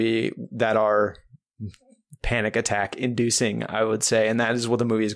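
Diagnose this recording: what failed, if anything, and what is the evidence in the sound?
Nothing failed: no stage of the chain, from capture through playback, leaves an audible mark anywhere in the speech.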